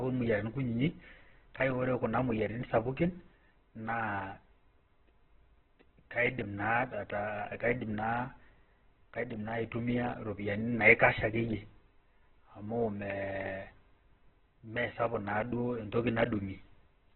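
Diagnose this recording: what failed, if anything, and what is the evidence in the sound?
The codec stage is where this one went wrong, and it's there for the whole clip. The speech sounds rough and grainy, with a noisy, fizzy texture instead of clean tone, and nothing survives above about 4.3 kHz. That combination points to likely Opus compression at a very low bitrate, something like 8 kbps. It stayed in its music (CELT) mode but squeezed down to narrowband. With so few bits, it's filling bands with folded or noise content, which is where the grit comes from.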